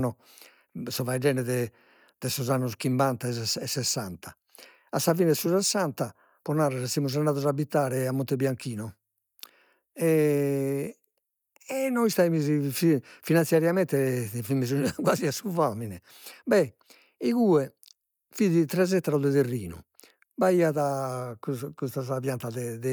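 No technical faults can be heard anywhere in this recording. Nothing in the signal chain draws attention at any point while the speech runs.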